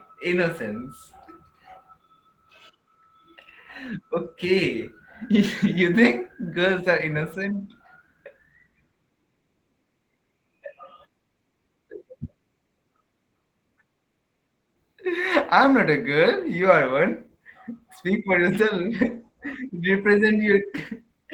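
Opus voice compression runs throughout the speech: SILK's linear prediction carries the band below 8 kHz while a sparse CELT layer fills the top in 20 ms frames. Coarse excitation coding, consistent with about 16 kbps, makes the voice plainly hoarse, slightly robotic and thin above.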